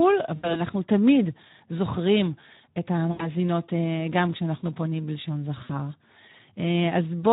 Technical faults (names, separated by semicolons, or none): Speex codec; VoIP packet loss concealed by the speech codec